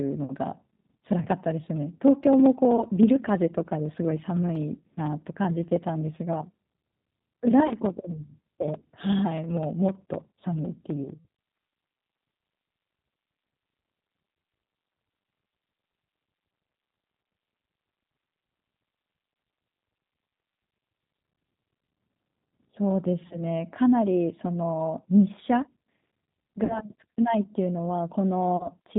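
Throughout, the G.729 codec at 8 kbit/s removes everything above 4 kHz and gives the speech a rough, synthetic texture, unlike simple band-limiting, which only dulls the sound.

VoIP packet loss concealed by the speech codec occurs at 1.22–1.26, 2.76–2.84, 7.67–7.76, 11.17–11.26, 17.23, 23.27–23.40, 26.64–26.84 and 28.57–28.68 s. In each case the decoder stretches the last sound into a fading buzzy tone or coloured noise instead of leaving a silent gap, and the speech stays weak for a moment after each event.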